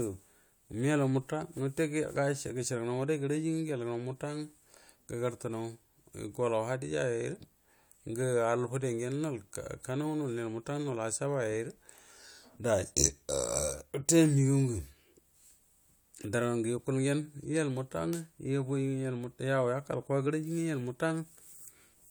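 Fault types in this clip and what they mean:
No fault types are present in this clip.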